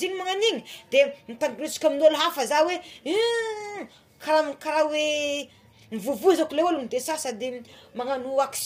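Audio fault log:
throughout, low-delay AAC compression: the speech was likely encoded with low-delay AAC, whose very short frames resolve pitch harmonics poorly, at a rate that fits about 32 kbps. The voice sounds plainly rough and grainy, with noise filling the gaps between harmonics.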